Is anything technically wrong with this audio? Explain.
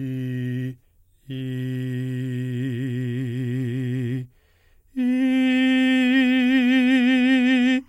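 Yes, there is timecode bleed. From 5.39 s to the end, linear timecode leaks into the music, a faint chirping warble about 45 dB down that switches near 1 and 2 kHz, fitting 25-frame code. A spectrogram would show thin alternating bands at those frequencies.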